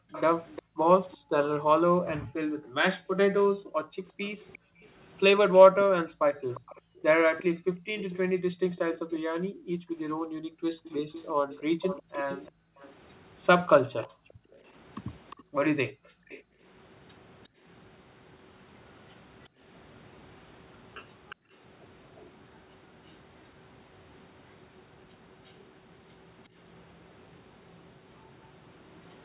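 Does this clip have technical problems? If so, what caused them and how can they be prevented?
Yes. Between 0.0 and 21.54 s the room background keeps dipping or vanishing, about seven seconds in all, falling by up to about 40 dB. This is background gated by the echo canceller: while far-end audio played, it suppressed the microphone hard, then released. Gentler suppression with comfort noise would prevent it.

A faint delayed copy of the speech trails it by 355 ms, from 0.12 to 16.43 s at about 20 dB below the speech, and again from 19.44 to 29.25 s at about 30 dB below. This echo leak is likely from a loudspeaker-using participant whose echo canceller let its pickup through. A headset or better echo cancellation on that end would prevent it.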